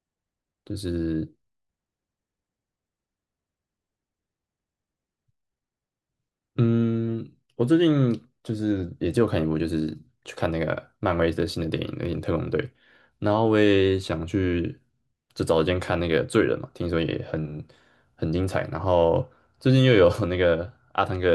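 No technical faults can be heard anywhere in this speech recording. Nothing in it calls for a timestamp or a closer listen.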